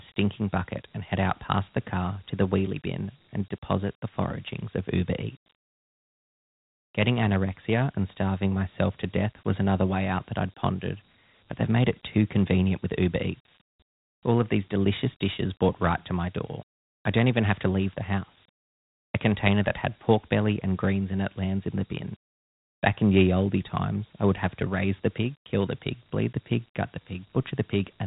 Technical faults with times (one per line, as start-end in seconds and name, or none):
0.00-28.06 Dialogic VOX ADPCM